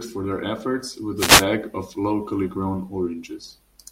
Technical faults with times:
1.16-1.46 wireless microphone noise hit

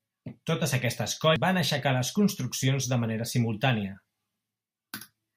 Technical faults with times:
1.36-1.39 damaged data in a compressed stream

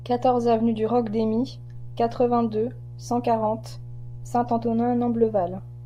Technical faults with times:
0.00-5.85 mains hum

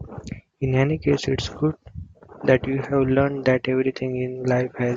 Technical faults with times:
none

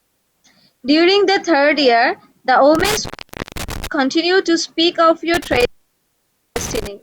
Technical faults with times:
2.75-3.87 intermittent contact
5.34-6.87 intermittent contact

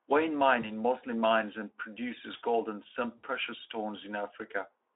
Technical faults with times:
0.61-0.68 VoIP packet loss concealed by the speech codec
3.17-3.25 VoIP packet loss concealed by the speech codec

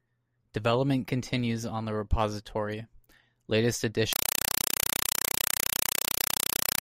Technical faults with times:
4.13-6.82 compressed stream played as audio

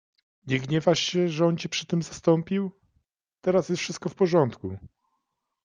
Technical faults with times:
none

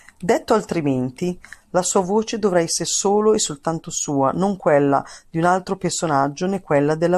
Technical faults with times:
0.36 compressed frames skipped

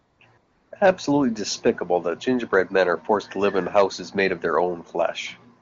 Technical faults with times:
0.00-0.71 AMR comfort noise

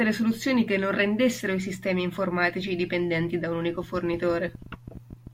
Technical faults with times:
3.75-5.28 train of clicks

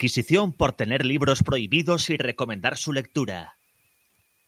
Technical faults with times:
none

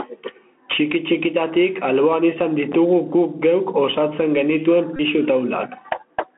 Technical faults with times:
0.00-6.37 gain pumping
0.00-6.37 Bluetooth CVSD headset codec
4.96-5.01 Bluetooth headset packet repeated

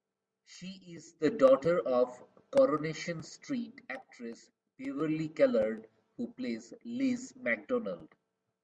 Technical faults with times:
none

